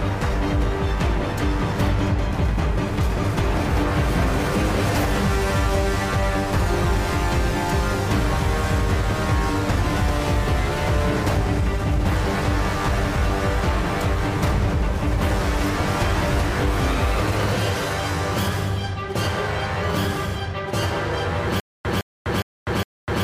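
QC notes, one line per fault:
21.6 s to end, stutter with silent gaps: a 161 ms fragment repeats four times, each followed by about 249 ms of digital silence, every 410 ms. Likely a stalled player replaying its last buffer. The waveform shows identical blocks separated by flat silent gaps, and the spectrogram shows repeated vertical slices with blank columns.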